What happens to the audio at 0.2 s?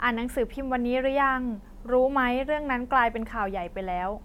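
Nothing goes wrong at 0.2 s; the speech there plays through intact, with no dropout, click, distortion or glitch.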